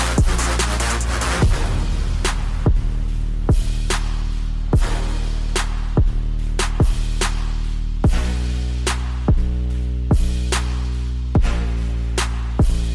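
No technical faults can be heard anywhere in the audio. Nothing in it needs a timestamp or a fix.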